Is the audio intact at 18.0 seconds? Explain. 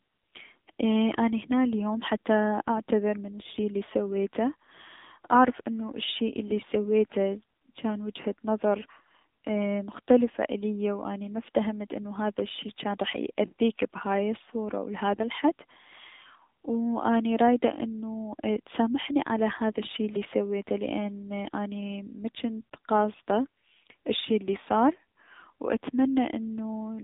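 No. At 18.0 seconds, as throughout the speech, the AMR narrowband mobile codec is at work. It keeps only about 150 Hz to 3.7 kHz. It rebuilds the voice from a vocal-tract model and sparse pulses. The buzzy, synthetic tone fits a low rate near 7.4 kbps.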